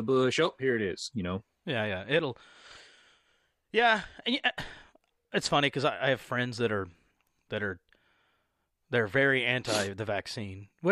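Nothing goes wrong anywhere in this speech recording, so there's nothing here to point out.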